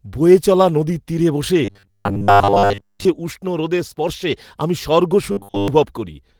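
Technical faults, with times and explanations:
1.65–3.06 s and 5.32–5.68 s, robotic sound from repeated short buffers: new audio likely arrived too seldom, so playback kept repeating a roughly 10 ms buffer in place of most of the real speech. That repetition imposes a fixed 100 Hz metallic buzz, starting after "চলা নদীর তীরে বসে" and again after "উষ্ণ রোদের স্পর্শে আমি".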